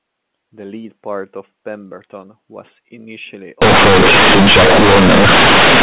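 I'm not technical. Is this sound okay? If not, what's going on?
No. From 3.62 s, just after "was initially", the sound turns into loud, harsh buzzing until the end. This is companded audio read as linear: compressed telephone samples are played back without being expanded. The telephone-style G.711 coding before that point sounds as a phone line should.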